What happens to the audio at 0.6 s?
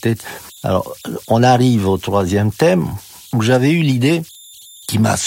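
A faint tone near 4 kHz, sitting about 28 dB below the speech, is present at 0.6 s, as it is throughout the clip, heard as a whistle in pauses and as grainy noise under the speech. These are converter idle tones: an undithered delta-sigma converter settles into repeating bit patterns at low levels, producing tones whose pitch depends on the input's offset.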